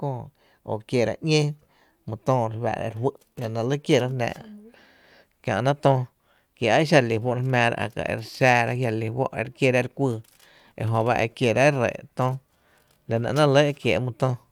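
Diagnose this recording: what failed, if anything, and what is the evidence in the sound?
Nothing in the speech recording points to a failure at any stage of the signal chain.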